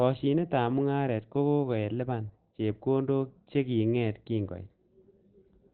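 It's a short speech clip with heavy codec damage throughout. Nothing sits above about 4.4 kHz, so the voice comes across muffled and hoarse, typical of narrowband speech-mode coding. It's likely Opus compression at a low bitrate, around 12 kbps.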